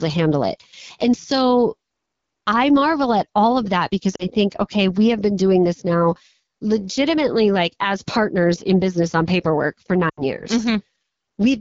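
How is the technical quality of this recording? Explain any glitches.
The technical quality is limited: the whole clip is carried by a low-rate wideband phone codec, and the sound breaks up twice.

AMR wideband (HD Voice) codec, throughout: the speech is rebuilt from a pitch-pulse excitation driving a vocal tract model, with the band above 6.4 kHz filled by shaped noise rather than real detail. The coding damage is plainly audible. The voice is rough and raspy, with a hissy top end. That roughness points to one of the lowest AMR-WB modes, around 8.85 kbit/s.

Lost AMR speech frames, 4.15 to 4.26 s and 10.09 to 10.22 s: corrupted frames were discarded, and the decoder filled the gaps by repeating the last good pitch and vocal tract settings at falling gain. The first gap covers about 40 ms, consistent with two frames. The second covers about 80 ms, which suggests four frames in a row. The sound drops to near silence within two frames, and then comes back weak and rough for a moment.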